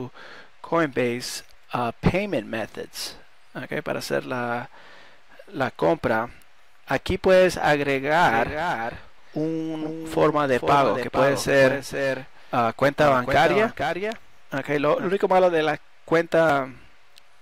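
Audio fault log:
8.28–15.08 s, doubled audio track: a second full-band copy trails about half a second behind, roughly 5 dB quieter, with no decay or room colour, unlike an echo. It starts and stops abruptly, likely from a second, slower capture path.
16.50 s, damaged data in a compressed stream: a brief glitch where the decoder misreads corrupted frames and resyncs.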